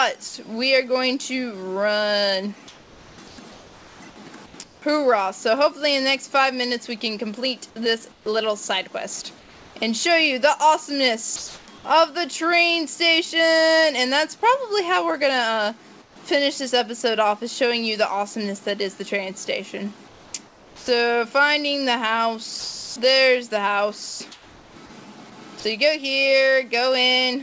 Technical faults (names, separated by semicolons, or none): sound dropped by the voice detector; comfort noise in place of the background; sound chopped by the voice detector